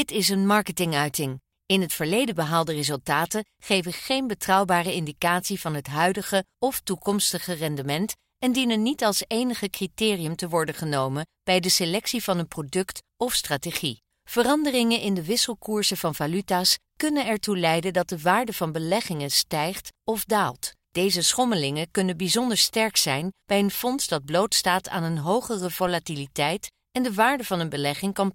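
At 25.87 s, just after "blootstaat aan een hogere", a DC step occurs: the waveform's zero line suddenly jumps by about -30 dBFS, and a 20 Hz high-pass then drains the offset away. The result is a brief low thump beneath the speech, which carries on unchanged.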